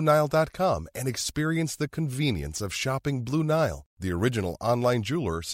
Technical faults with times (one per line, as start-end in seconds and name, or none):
none